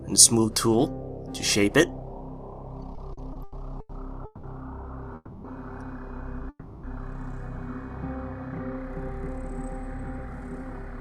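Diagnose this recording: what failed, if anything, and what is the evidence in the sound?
Network delivery, heard as repeated stalls (stutter): from 2.95 to 4.46 s the jitter buffer ran dry six times, stretching the last sound by up to 180 ms.

Two call audio freezes, at 5.15–5.47 s and 6.49–6.86 s: the sound hangs and fades for about 0.29 s and 0.34 s, likely from packets held up in the network.

Then a jitter buffer speed-up from 9.12 s to the end: the receiver trims pitch periods, roughly 150 ms in total, so the sound runs 6% fast at unchanged pitch.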